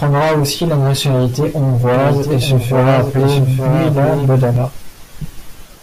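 From 1.94 s to 4.56 s, right after "aussi la nationalité", a doubled audio track appears: a dry copy about a second late, around 5 dB quieter, likely from a second capture path, cutting in and out abruptly.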